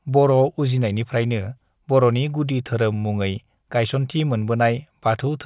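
No technical faults can be heard in this recording.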